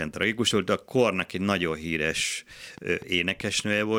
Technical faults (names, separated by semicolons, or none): train of clicks